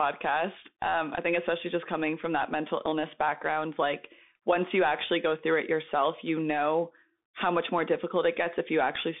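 Bluetooth CVSD headset codec damage runs through the whole clip. This narrowband link codes each sample as a single up-or-down bit with an adapting step size, which fits a 64 kbit/s stream. The speech sits in a band of roughly 150 Hz to 3.6 kHz, with nothing above 3.7 kHz, so it sounds boxed-in. Where loud high content outruns the step, it distorts, s sounds turn scratchy, and a granular hiss lies underneath throughout.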